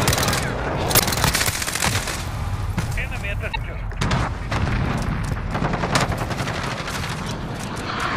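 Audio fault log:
0.95–1.01 s, 3.49–3.56 s and 7.28 s: damaged data in a compressed stream. Corrupted frames make the decoder misread the bitstream and lose sync until it finds a valid header, producing brief chirps, squawks, clicks or short holes. A spectrogram shows short broadband smears, and the waveform shows abrupt discontinuities.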